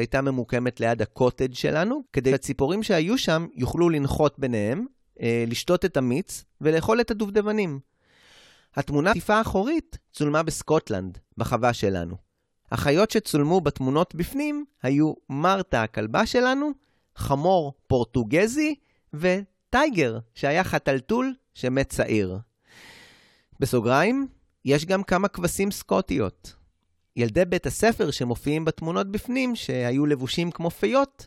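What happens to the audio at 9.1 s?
At 9.11 s, compressed frames are skipped. A run of about ten frames never reaches the output, so about a fifth of a second of speech is lost. The decoder either could not find those frames or rejected them as damaged. The jump fits a frame length of 23.2 ms. Adjacent frames overlap, so the join is not a sharp click. It is a short smeared blip, and the speech then resumes slightly further along.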